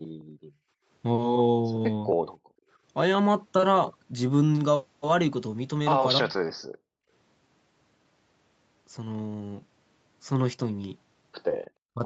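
Background gated by the echo canceller, 0.08 to 0.88 s: while the far-end loudspeaker was playing, the canceller clamped the microphone hard, so the room tone sinks by about 26 dB and sounds switched off before it returns once the canceller releases. The same gating recurs from 2.38 to 2.69 s, dropping about 37 dB, and again from 6.69 to 7.1 s at about 36 dB, each time as a hole in the ambience.

Speech suppressed in double talk, 6.2 to 6.35 s: the talker's level falls by roughly 20 dB for a brief moment. This is likely the canceller failing to separate the near-end talker from loudspeaker echo while both sides spoke, and attenuating everything together. A second, shorter dip of roughly 15 dB at 11.94 to 12.01 s clips the very end of the sound in the same way, likely from the same double-talk suppression.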